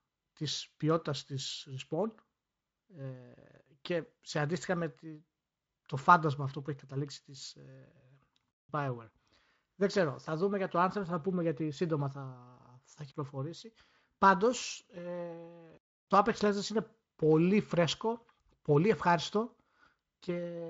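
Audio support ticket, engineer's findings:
Engineer's findings: no fault found in this speech audio, carried over Speex at 34 kbps with content ending near 7.7 kHz.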